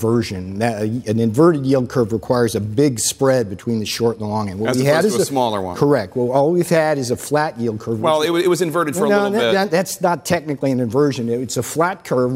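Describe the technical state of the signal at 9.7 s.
At 9.7 s the sound sits inside a drift correction step lasting from 9.64 to 10.74 s. Playback runs 5.2% fast and pitch rises 88 cents, nearly a semitone, then snaps back. A clock-matching resampler likely changed rate abruptly to rebalance its buffer.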